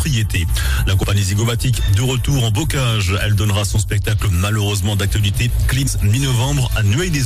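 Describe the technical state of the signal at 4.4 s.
At 4.4 s the signal is intact, with no dropout, distortion, glitch or other technical fault to be heard at that point.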